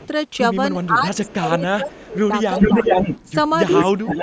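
In this speech clip, a faint delayed copy of the voice trails about 0.37 s behind at 0.0–0.09 s, 0.83–1.34 s and 1.92–2.07 s. From 2.59 s to the end, a stronger copy about 0.43 s late sits roughly 5 dB above the speech. This is echo leak, likely from a far-end loudspeaker whose echo canceller let its pickup return down the line. Meanwhile the voice dips and breaks up in patches between 0.89 and 2.75 s, about a second in all, by up to about 15 dB. It does so again at 3.72–4.17 s, by up to about 20 dB. This is likely speech suppressed in double talk: with both sides active, the canceller could not separate the talker from the echo and turned both down.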